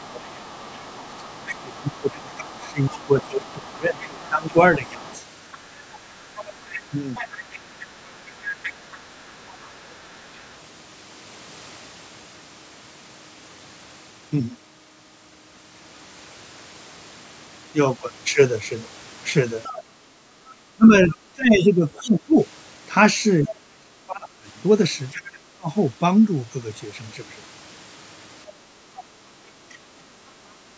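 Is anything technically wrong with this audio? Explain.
Yes. Speech suppressed in double talk occurs from 0 to 7.24 s, 19.84 to 25.7 s and 29.98 to 30.13 s. The level dips by up to about 30 dB, likely because the echo canceller attenuated the talker along with the echo. On the waveform the envelope visibly sags.

The other side's voice is leaking through from 0.1 to 10.54 s, 19.63 to 21.15 s, 25.12 to 25.29 s and 28.47 to 29.78 s. It is about 20 to 30 dB below the main speech, likely residual loudspeaker echo, and shows as faint overlapping harmonic traces on a spectrogram.

The background is gated by the echo canceller at 9.24 to 9.41 s and 20.41 to 20.47 s. The room sound drops by about 6 to 8 dB, seen as brief vertical gaps in the noise floor.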